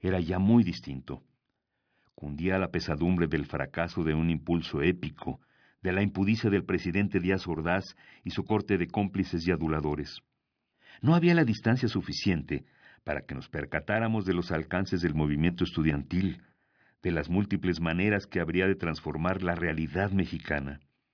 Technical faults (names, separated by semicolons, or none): none